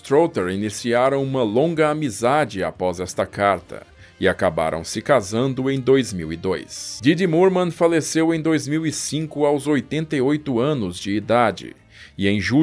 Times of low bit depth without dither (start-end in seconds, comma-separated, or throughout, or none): none